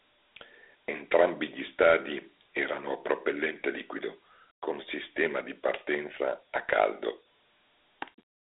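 Speech, narrowed and rough for the whole clip: the sound sits in a telephone-like band from about 300 Hz to 3.6 kHz with nothing above 3.8 kHz, and a gritty, plainly audible hiss rides along with the voice. This is Dialogic VOX ADPCM, the OKI scheme that stores each sample as a 4-bit step from a predicted value. That coarse stepping leaves the granular noise, and the cutoff points to 8 kHz sampling, fitting a 32 kbps stream.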